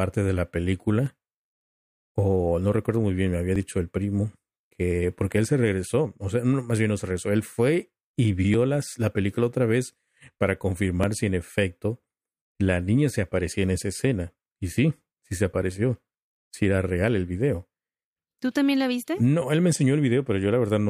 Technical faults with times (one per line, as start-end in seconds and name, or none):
3.56 audio missing between chunks
8.54 audio missing between chunks
11.03 audio missing between chunks
18.51 audio missing between chunks